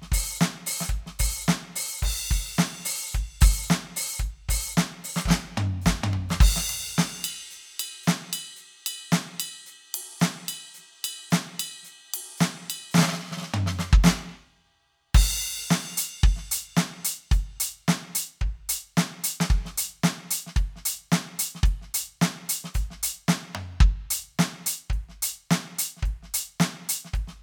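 No technical faults can be heard anywhere in this music.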